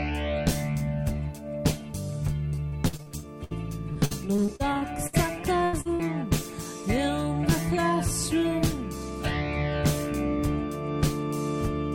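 From 2.49 to 3.53 s and again from 3.93 to 5.15 s, repeated packet loss (robotic sound) sets in: audio keeps arriving late or not at all, holes up to about 62 ms are patched by extending the previous sound, and roughly a fifth to a quarter of each span is filler, giving choppy sound with pieces missing.

At 5.65 to 5.75 s a burst of packet loss drops about 80 ms in one go. The receiver stretches the last sound and fades it, heard as a held buzz or dying hiss, then jumps ahead with that stretch gone.

Short concealed packet loss follows at 5.81 to 5.87 s and 5.95 to 6.01 s, each losing about 40 ms. The brief fills blend back quickly, leaving a small smear or wobble where a short sound may be lost.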